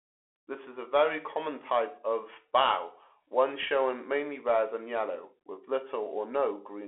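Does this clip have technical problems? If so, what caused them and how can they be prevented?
Yes. Throughout the clip the speech went through a Bluetooth CVSD headset codec, coding one up-or-down bit per sample, which fits a 64 kbit/s link. The band is confined to about 300 Hz to 3.4 kHz, with nothing above 4 kHz, and sibilants sound scratchy over a granular hiss. Switching the headset to a wideband or high-quality audio profile, or recording through a wired microphone, would avoid this.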